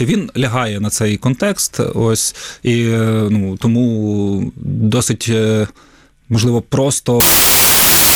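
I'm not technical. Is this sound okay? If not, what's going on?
No. Near the end, from 7.20 s to the finish, there's a wrong sample width fault. The audio was saved in four-byte chunks, but it's being read back in three-byte chunks, so most values are stitched together from the wrong pieces. You hear loud hissing noise with the speech buried underneath, playing at three-quarters speed, so it sounds slower and lower than it should.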